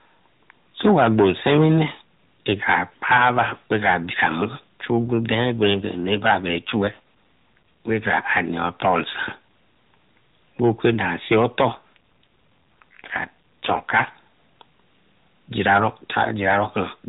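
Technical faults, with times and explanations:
6.38–7.91 s and 11.70–14.09 s, AMR rate drop: speech turns buzzier and more synthetic with no gap, which fits the codec stepping down from 12.2 to 5.9 kbps.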